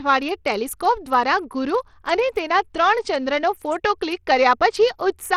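Block size mismatch (truncated) runs throughout this speech clip: the tail of each block is discarded, leaving a buzz at 91.9 Hz while speed stays essentially unchanged at 1.0x. Plainly audible coding damage is present from start to finish, with dull, flickering treble and gritty noise, likely from Bluetooth SBC compression starving the upper sub-bands, which fits a low bitrate around 80 kbps.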